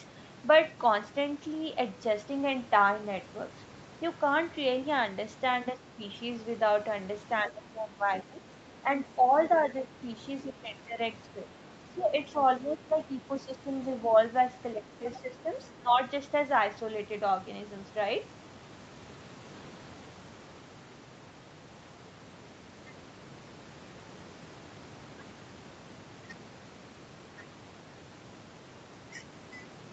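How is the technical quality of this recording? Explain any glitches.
The recording has two call-processing faults between about 7.5 and 16 seconds. The audio also stops at 8 kHz, as expected for this call path.

Speech suppressed in double talk at 7.48–9.9 s, 10.44–11.38 s, 11.94–14.17 s and 14.74–16.0 s: the echo canceller likely mistook the overlapping talk for echo and turned the speech down. It dips by roughly 10 dB, and by about 15 dB in the last stretch.

Other side's voice leaking through at 9.37–9.59 s and 15.13–15.42 s: residual loudspeaker echo, likely left uncancelled, surfaces as faint scraps of a second voice about 20 dB below the talker.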